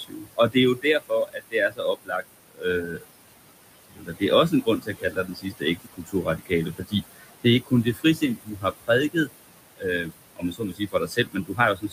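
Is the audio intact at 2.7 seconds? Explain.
No. At 2.7 seconds the sound falls within a stretch of speech cut by the noise suppressor, running from the start to about 3.04 s. The suppressor mistook parts of the speech for steady noise and turned them down with the background, by about 22 dB at the deepest, across roughly a second and a half of that span. Soft consonants and word endings sound swallowed or faint. Unlike a dropout or a codec gap, the sound never cuts to silence or clicks. It thins and fades selectively, band by band.

The same moment also carries the noise suppressor artifacts present through the whole clip. The room noise, which sits about 12 dB below the speech, is pulled down by about 20 dB in each frame wherever the suppressor judges it to be noise, so it sinks between phrases and swells back under the voice. This differs from codec warble because it tracks the noise floor's pumping rather than appearing evenly on the voice itself.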